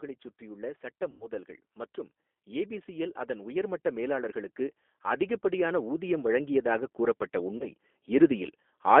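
Throughout, the G.729 codec confines the speech to roughly 250 Hz to 3.5 kHz; the spectrogram shows a hard ceiling, and the rough, synthetic 8 kbit/s texture is plainly audible.

From 1.11 to 1.27 s, VoIP packet loss concealed by the speech codec covers about 90 ms of missing audio, which fits three lost packets. The decoder stretches its last frame into a fading buzzy tone or coloured noise, seen as smeared bands and a decaying envelope.

From 2.44 to 8.96 s, automatic gain rising lifts the level by about 13 dB. Speech and background swell together, and the waveform envelope widens steadily.

At 7.58 to 7.71 s, another concealed packet loss replaces about 30 ms with a brief smear, which leaves a short blurred patch in the spectrogram.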